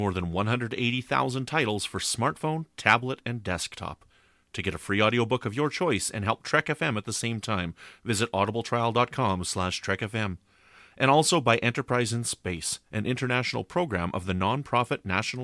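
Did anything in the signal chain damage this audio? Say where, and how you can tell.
No, none of the stages in this speech recording's signal chain left any audible damage: level, continuity, timing and frequency content all hold steady throughout.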